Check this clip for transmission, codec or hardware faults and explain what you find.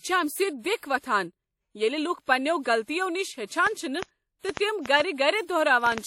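Two faults stand out: codec damage across the whole speech clip, and a run of clicks near the end.

Throughout, there's plainly audible damage that's likely WMA compression. It fits a bitrate around 48 kbps and nothing survives above 17.5 kHz. The transform coder smears quantisation noise over tens of milliseconds and drops weak detail, so you hear ringing, a washy texture and hiss breathing with the speech.

From 3.67 to 5.99 s there's a train of clicks: roughly ten similar pulses at about 3.5 per second, irregularly spaced, peaking around 15 dB above the speech. It's likely interference from nearby equipment or a faulty connection or power supply. It comes across as ticking over the audio, including the pauses.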